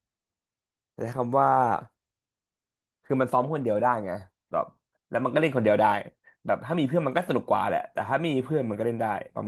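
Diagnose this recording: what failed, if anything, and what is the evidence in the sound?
Nothing failed here: the speech comes through the Opus voice link at about 24 kbps in its hybrid mode with the full band intact, and there's no sign of trouble at any stage between the microphone and playback.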